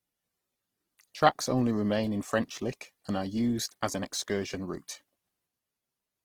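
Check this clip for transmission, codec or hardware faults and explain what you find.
One codec fault runs through the whole clip.

Opus compression, throughout: the speech sounds rough and grainy, plainly damaged. The likely cause is Opus in its music mode, which keeps each band's energy but, short of bits, fills bands with noise or folded lower content. The roughness fits about 16 kbps, though bandwidth stays full up to 20.4 kHz.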